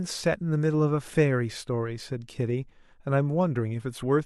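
Nothing goes wrong anywhere in this bit of speech, so there's no fault to point to here.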